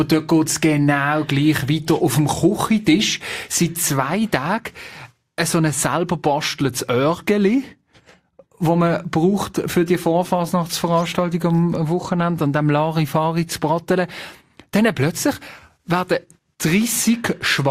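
No technical faults are audible anywhere in this audio.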